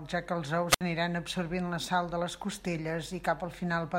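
At 0.68 s the speech breaks up in a wireless microphone squelch dropout lasting until 0.81 s. The analogue FM radio link weakened far enough that the receiver's squelch circuit closed and muted its output rather than pass a noisy signal. The fading carrier brings a short rise of hiss and static, then a hole of near silence lasting about 66 ms, before the signal recovers and the speech returns.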